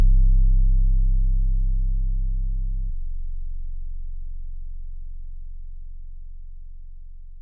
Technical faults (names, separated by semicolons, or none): wrong sample rate